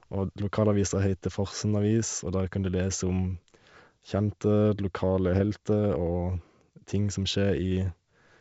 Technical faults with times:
5.32-5.42 bit errors on an ADPCM link

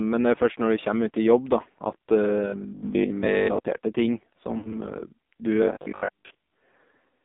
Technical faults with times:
0.00-7.25 AMR narrowband mobile codec
4.58-4.74 lost AMR speech frames

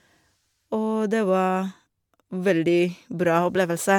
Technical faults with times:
0.00-3.99 generation loss

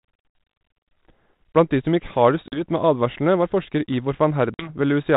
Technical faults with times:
2.48-2.62 packet loss on an ADPCM call
4.54-4.70 packet loss on an ADPCM call

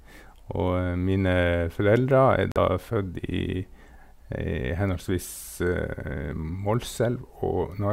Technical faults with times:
2.52-2.57 Bluetooth dropout

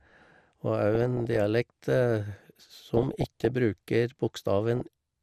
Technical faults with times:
0.00-5.22 MP2 compression
0.95-1.36 DAB burbling
2.56-3.50 DAB burbling
4.75-4.88 DAB burbling

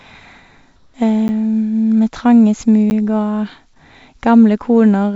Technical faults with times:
0.76-0.94 comfort noise in place of the background
1.28 block of digital silence
2.90 block of digital silence

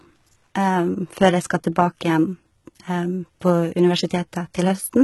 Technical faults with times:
0.00-5.04 HE-AAC compression

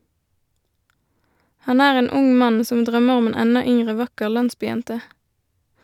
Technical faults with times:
4.37-5.83 sample clock jitter

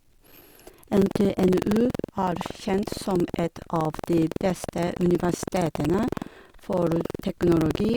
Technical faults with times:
0.00-7.96 buffer tearing

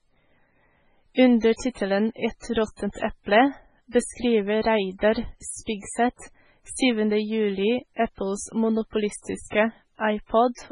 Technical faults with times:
0.00-10.71 low-bitrate audio saved at a high bitrate

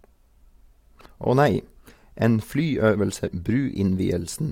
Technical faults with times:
1.04 damaged data in a compressed stream
3.26 damaged data in a compressed stream

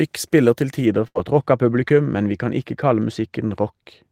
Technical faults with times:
0.86-4.12 de-emphasis applied wrongly
1.07-1.16 burst of packet loss
1.88-1.91 short concealed packet loss

